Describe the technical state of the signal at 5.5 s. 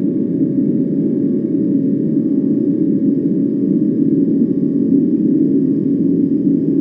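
At 5.5 s you're hearing a doubled audio track, present the whole way through: a flat copy trailing about a second behind, roughly 5 dB down, likely a second capture path running late.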